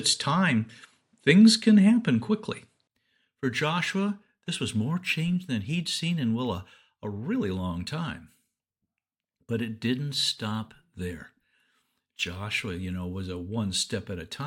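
From the start to 2.89 s the sound is dull, with nothing above 11.4 kHz, a faint hiss of its own and a level a few dB off. A 20 ms silence then brings fuller sound, which points most likely to an input switched to a poorer device. A simple filter change would not also shift the level and noise floor at the same moment, across a gap.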